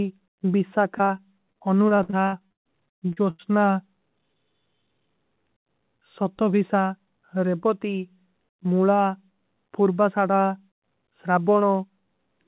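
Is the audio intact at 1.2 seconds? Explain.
No. At 1.2 seconds the speech is inside a stretch of repeated packet loss, giving a robotic sound, from 0.98 to 2.7 s. Packets kept going missing or arriving late. Each hole was patched by stretching the last bit of sound forward. Then the next hole came. More than a dozen breaks occur, the longest about 130 ms. Roughly a quarter of the span is concealed. It sounds choppy, with pieces dropped.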